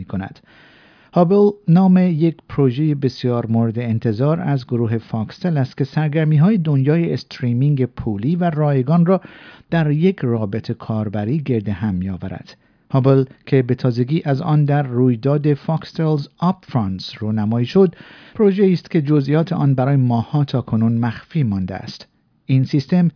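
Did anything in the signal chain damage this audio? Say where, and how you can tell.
No, nothing in the chain from capture to playback leaves an audible mark on this speech recording.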